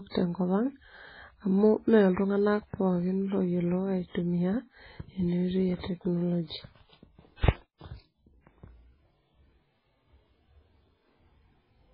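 Throughout the speech the treble stops dead around 5.2 kHz, and what remains sounds watery and swirly, with chirpy s sounds and smeared onsets. This is likely heavy MP3 compression at a very low bitrate, consistent with roughly 16 kbps, where weak frequency lines flicker between frames.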